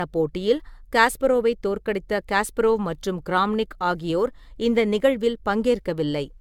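From start to end the speech sounds swirly, hollow and smeared, consonant attacks blurred, with nothing above 17 kHz. This is generation loss, likely from encoding about five times over, which fits repeated AAC at around 96 kbit/s, each pass stacking fresh quantisation noise.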